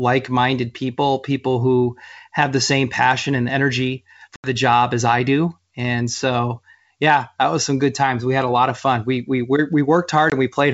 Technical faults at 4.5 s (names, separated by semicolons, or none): packet loss on an ADPCM call